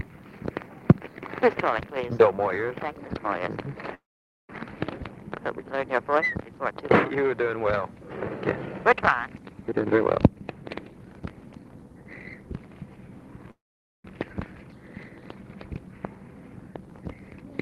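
From 3.94 to 4.50 s the audio stops for about 0.55 s in a call audio freeze, most likely because packets were held up in transit and the jitter buffer ran dry. The receiver briefly extends the last sound, then about 0.49 s of silence follows. When the packets arrive, the audio resumes where it left off. Nothing is lost, but everything afterwards runs about 0.55 s later.

From 9.61 to 11.84 s a jitter buffer speed-up follows. The buffer had built up more audio than its target, so the receiver trimmed short pitch-period pieces over and over to cut the delay. Playback runs at about 124% speed with the pitch unchanged, so this stretch sounds rushed. Roughly half a second is dropped in the process.

From 13.51 to 14.05 s a second call audio freeze repeats the pattern. It fills about 0.53 s, mostly with silence (about 0.49 s), and resumes with nothing missing and about 0.53 s added delay. Throughout the clip the call codec limits the audio to about 12 kHz.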